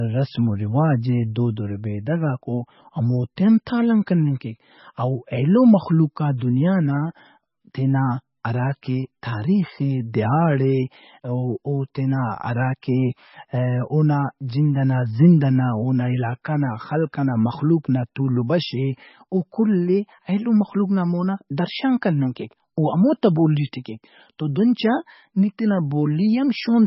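From start to finish, the speech sounds band-limited and smeared. Nothing is heard above about 5.6 kHz, so s sounds lose their bite. Weak detail flickers in and out, giving a watery, swirling texture. Consonant onsets blur. The damage is heavy. This is likely MP3 compression. The encoder was starved of bits, which fits a very low bitrate near 18 kbps. It cut the treble at a fixed point and dropped quiet frequency content frame by frame.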